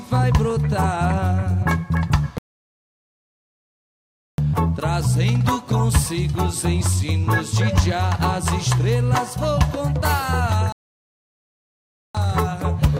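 At 2.38 s the sound cuts out completely. Silence holds for 2 seconds, until 4.38 s, and then the audio resumes. This is a playback stall. The player likely ran short of data or had its thread blocked, so nothing reached the output. The same thing happens again at 10.72 s. This gap is shorter, about 1.4 seconds, and the sound returns at 12.15 s. Each stall breaks the flow abruptly.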